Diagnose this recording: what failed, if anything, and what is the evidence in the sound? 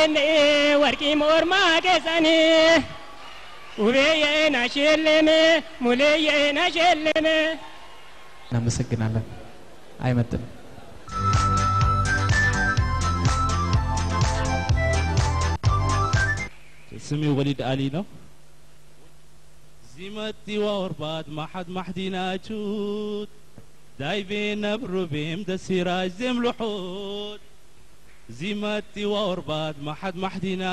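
Nothing failed in this recording, and no fault can be heard at any point. No stage of the chain, from the wiring and converter through to storage and playback, leaves any sign of a failure.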